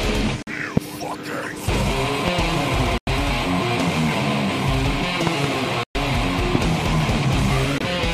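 Short silences with abrupt edges cut into the sound at 0.42, 2.98, 5.83 and 7.78 s, lasting 46, 93, 116 and 23 ms, and the audio resumes as if it had kept playing, likely a Bluetooth dropout from packets arriving too late. Sharp loud pops, roughly 15 dB above the sound, land at 0.77, 2.28 and 6.55 s, with a double pop between 5.27 and 5.47 s, likely from electrical voltage transients.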